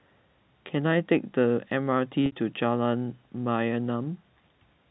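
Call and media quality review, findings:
Packet loss with pitch repetition at 2.26 to 2.32 s: about 60 ms dropped, bridged by repeating the last pitch period, so a short held buzzy tone. Loss sits in the network/jitter buffer path. Narrowband G.711-style sound, nothing above 4 kHz.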